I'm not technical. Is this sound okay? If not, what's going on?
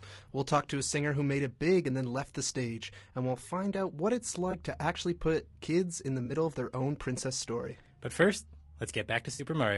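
No. Two things are wrong with this speech.

The whole clip sounds rough and grainy, a bit hissy between the tones of the voice, and the top end sounds thin and artificial. That is typical of low-delay AAC compression, the kind used in video calls. It likely comes from squeezing the sound into very short chunks with too little data, so fine detail gets lost.

There are also three moments of AAC frame loss with concealment. Small pieces of the sound went missing, and the player patched them over by guessing from what came just before. Each patch sounds like a brief smeared, noisy blip. The first is at 4.51 to 4.55 s, after "find out what it's" and before "to actually put kids". The second is at 6.25 to 6.31 s, after "put kids in the" and before "of their own princess". The third, and longest, is at 9.33 to 9.43 s.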